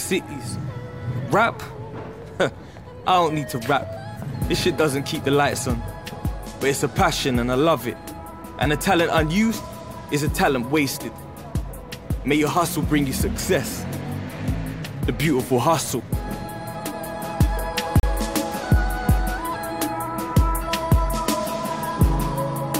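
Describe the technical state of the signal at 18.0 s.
A gap between stream segments runs from 18.00 to 18.03 s: mismatched timestamps at a 6-second segment boundary leave a 34 ms hard-edged silence, with no sound lost.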